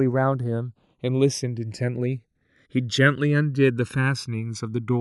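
From start to finish the speech carries channels drifting apart. The left and right signals were captured on devices running from separate clocks that disagree by something like 150 ppm, so the offset between them grows steadily, reaching around a millisecond by the end. Folded to mono, the resulting comb notches glide slowly down through the spectrum, giving a gradual flanging sweep. Unlike fixed comb filtering, the coloration never settles, and unlike an effect flanger it moves one way without cycling back.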